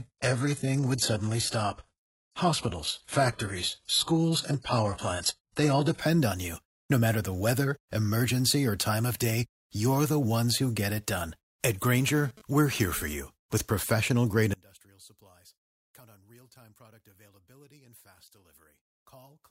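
A speech clip opening in the adaptive stream starting at a low bitrate: from 0.0 to 6.0 s the treble is thin and smeared, consistent with a roughly 12 kbit/s HE-AAC start, and a spectrogram shows a hard ceiling with nothing above 11.5 kHz until quality jumps without a gap to something like 96 kbit/s AAC-LC. From 11.84 to 13.13 s a GSM phone buzz intrudes, a raspy 217 Hz burst pattern about 23 dB below the speech that comes and goes as a nearby phone transfers data. On a spectrogram it appears as a ladder of evenly spaced harmonics unrelated to the voice. From 14.54 s to the end, the level collapses by about 29 dB and only a faint residue remains. The waveform shows a sudden drop in amplitude, likely from one channel inverted cancelling the centred speech when the two channels are summed to mono.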